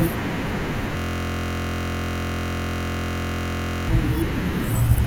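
A system hang loop runs from 0.97 to 3.88 s: the driver froze while the hardware kept replaying the same 23.22 ms ring buffer, which fits a 1024-sample buffer. The speech gives way to a steady buzz at 43.1 Hz.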